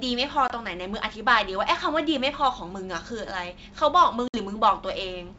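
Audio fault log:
0.48–0.51 s and 4.28–4.36 s: packet loss on an ADPCM call. Gaps of 20 and 60 ms drop to silence. The out-of-step predictor then brings sound back slightly distorted.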